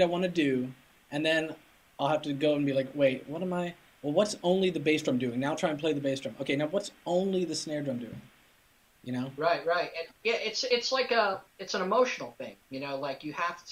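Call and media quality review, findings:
No audible faults found across the recording.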